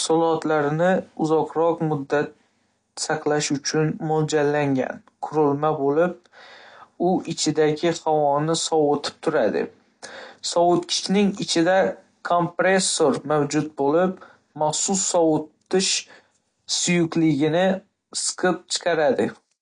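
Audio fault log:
Throughout: AAC compression, likely at a low bitrate near 32 kbps; nothing above 9.8 kHz, with smeared, warbling sibilants unlike a clean low-pass roll-off.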